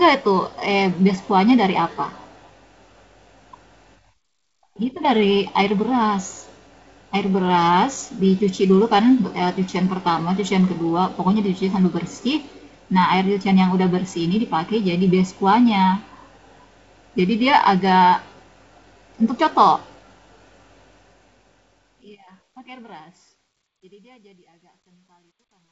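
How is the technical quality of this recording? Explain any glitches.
The recording has one clear glitch: truncation distortion on the closing fade. The speech itself comes through G.722 wideband telephone coding at what sounds like 48 kbit/s, with nothing above 7.7 kHz on a spectrogram.

Truncation distortion on a fade, from 20.77 s to the end at 25.72 s: the fade-out begins around 21 s, but the level stage reduces resolution without dither, in a way that fits about 11 bits. As the signal approaches the smallest step, the waveform collapses into coarse square stairs. From 23.21 s onward it turns gritty. A spectrogram shows broadband speckle instead of a clean taper.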